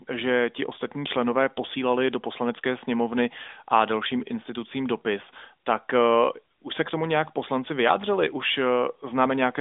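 A speech recording with no technical faults to report. It has the narrow, telephone-like sound of the AMR narrowband mobile codec, with the band running from about 250 Hz to 3.6 kHz and only a light codec colouring that fits its 12.2 kbps mode.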